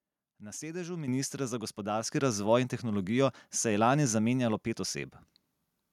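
At 1.08 s the microphone volume stepped up by about 9 dB, then again at 2.1 s by about 5 dB, just before "razvoj in tehnologijo". The call software raised the input gain in single jumps, so the speech and the background noise get abruptly louder together.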